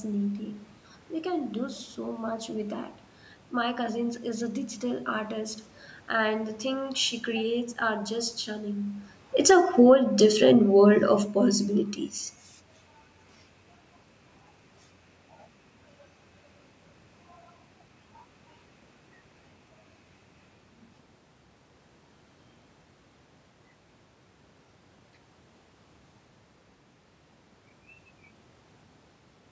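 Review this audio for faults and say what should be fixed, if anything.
Automatic gain falling runs from 9.34 to 11.69 s. The gain control judged the input too loud or its background noise too strong and eased it down by about 4 dB. Unlike a talker leaning back, the room noise sinks together with the speech. Lowering the microphone's input level keeps the control from backing off.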